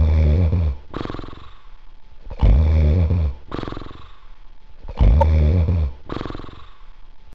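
Damaged data in a compressed stream appears from 5.21 to 5.23 s: a corrupted stretch of the encoded bytes makes the decoder misread those frames and lose sync until it finds a valid frame header again, producing a short disruption lasting roughly 26 ms.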